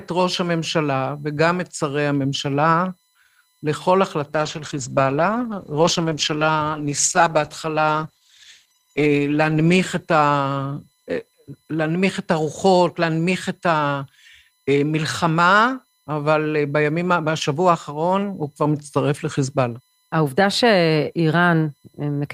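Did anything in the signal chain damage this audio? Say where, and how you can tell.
Yes, two faults are audible. The first is USB whine in the analogue wiring, specifically the power or ground path. A steady tone based on 1 kHz runs through the whole clip, and its strongest component sits at 4 kHz. It stays faint, roughly 45 dB below the speech, and its pitch never shifts. The USB bus draws current in 1 ms frames. That periodic load leaks into the audio through shared power or ground, which produces a fixed 1 kHz fundamental with harmonics.

The second is a call bitrate drop, at the network and codec stage. From 4.35 s to 11.89 s the speech turns coarse, rough and watery, and the top end dulls. It sits at its worst for about 4.5 s before clearing. The call's bandwidth estimate fell, so the encoder was forced to spend far fewer bits. The sound fits a fall from around 40 kbps to about 13 kbps, where Opus quantises coarsely and trims the high frequencies.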